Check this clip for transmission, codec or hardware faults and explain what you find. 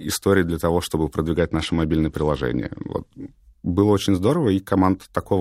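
One codec fault is present in the speech. From 1.38 to 2.92 s there is a Bluetooth SBC bit pool drop. The treble turns dull and a gritty noise rises. That fits the bit pool falling from 31 to 11, near 83 kbps. Upper sub-bands lose their bits. Lower ones are coarsely quantised.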